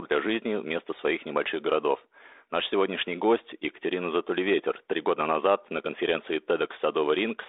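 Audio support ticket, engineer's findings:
Nothing to flag here, no fault found anywhere in this speech clip, so the ticket can go back as no issue detected.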